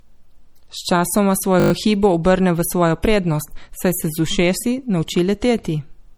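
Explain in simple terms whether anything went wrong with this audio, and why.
A system hang loop occurs from 1.6 to 1.72 s in this speech clip. The computer briefly froze while the sound hardware kept replaying the same 20 ms piece of audio, six times in a row. That rapid repetition is heard as a short buzz at 50 times per second.

Low-bitrate audio saved at a high bitrate affects the whole clip. The speech carries the leftover flaws of heavy compression. The likely cause is a small, squeezed MP3 later re-saved as a large one, which cannot restore the detail the first squeeze discarded.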